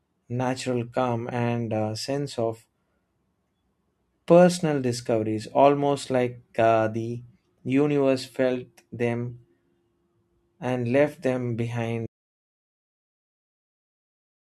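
The input was likely lost at 12.07 s, right after "and left them", so this audio dropout to silence leaves dead silence, no room tone, through to the end.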